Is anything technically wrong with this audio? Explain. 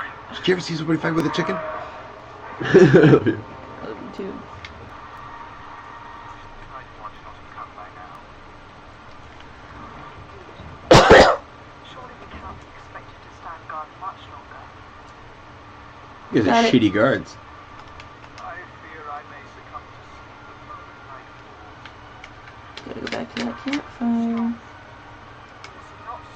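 Yes. There is overlap between stream segments, heard as tiny skips at 1.20, 2.20, 4.18, 5.18, 6.17, 7.16 and 8.15 s, mostly spaced about one second apart to match 1.0 s segments. Where neighbouring segments' timestamps overlap, the player trims a couple of milliseconds of real audio, so the waveform jumps. Unlike a dropout, no silent gap opens. The sound simply lurches forward.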